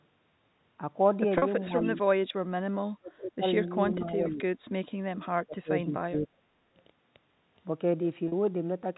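At 1.38 s there's a brief packet loss with pitch repetition. About 40 ms of the stream goes missing, which fits two 20 ms packets, and the decoder patches the hole by looping the last pitch period. Because the gap is so short, it comes across as a tiny held, slightly buzzy smear rather than a dropout. The same thing happens again at 8.28 s, another 40 ms bridged the same way.

From 1.68 to 1.86 s the speech dips a little, around 5 dB at the deepest, for roughly a tenth of a second. That's likely speech suppressed in double talk: the echo canceller seems to have heard the far side at the same moment, couldn't tell the near talker from loudspeaker echo, and pulled the level down.

Right at the tail of that, 1.85 to 1.89 s, a faint echo leak slips through. It's a short delayed copy of the sound arriving about 441 ms late and sitting roughly 20 dB below the main speech, so it's a quiet ghost scrap rather than an obvious repeat. 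Most likely the far end is on a loudspeaker and its echo canceller missed a bit of what its mic picked up, sending it back.

The double-talk suppression returns three more times, and harder. From 2.98 to 3.44 s the speech drops by around 30 dB, close to vanishing for about 0.4 s. From 3.97 to 4.48 s it's milder, about 10 dB down over roughly 0.3 s. Then from 5.38 to 6.34 s it bites again, roughly 25 dB deep across about 0.7 s.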